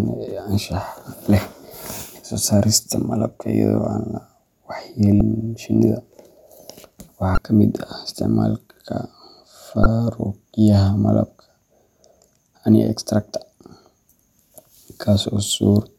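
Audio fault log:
5.18–5.21 s, 7.34–7.38 s, 9.83–9.86 s: damaged data in a compressed stream. Each is a brief glitch as the decoder misreads corrupted frames and resyncs.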